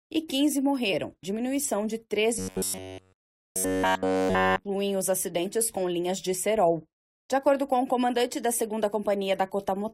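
Damaged data in the compressed stream at 0.92 s: corrupted bytes make the decoder lose sync and hunt for the next frame, producing a brief glitch. Robotic sound from repeated short buffers from 2.39 to 4.64 s, likely from audio arriving too late, so a roughly 10.7 ms chunk repeats throughout, imposing a rigid metallic 93.8 Hz buzz.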